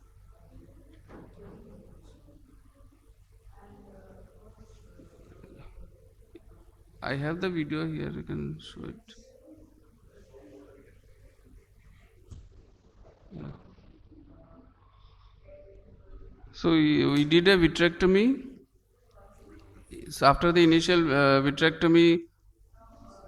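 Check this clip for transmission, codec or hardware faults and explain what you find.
One transmission fault is present: a call bitrate drop from 12.32 to 17.14 s. The estimated bandwidth collapsed and the encoder was starved of bits, so it coded coarsely and band-limited the sound, which turns rough and muffled. The worst stretch lasts about 1.76 s, consistent with a fall from around 64 to 10 kbps. On a spectrogram, content above 6 kHz vanishes, leaving a flat ceiling where energy previously reached 20 kHz.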